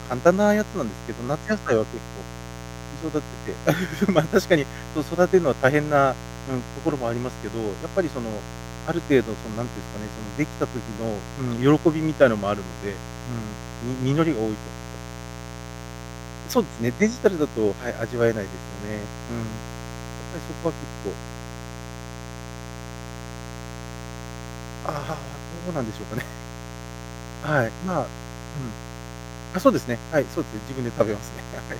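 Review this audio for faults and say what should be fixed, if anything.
A mains buzz runs throughout the speech, sitting roughly 15 dB below it. Sharp switching spikes on 60 Hz mains repeat twice per cycle, at 120 Hz, spreading harmonics up to several kHz and giving a steady, raspy edge. Fix it at the source: balanced, shielded cabling, mic lines kept away from dimmers and power supplies, and a proper ground.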